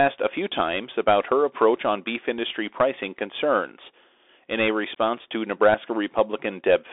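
Speech heard through a Bluetooth CVSD headset codec for the whole clip, with nothing above 3.8 kHz and a thin line band of 300 Hz to 3.6 kHz, fitting a 64 kbps one-bit delta stream. Its adaptive step lags loud high sounds, so s sounds turn scratchy over granular hiss. A spectrogram shows an empty band above the ceiling.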